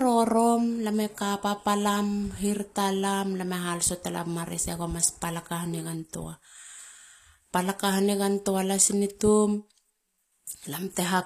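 HE-AAC compression damage runs throughout this speech clip: the treble above the core band sounds synthetic and gritty, likely from spectral band replication at a bitrate around 24 kbps, with nothing above 14.9 kHz.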